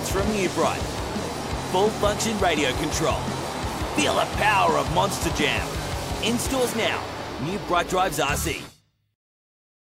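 Nothing in the signal points to a technical fault anywhere in the recording.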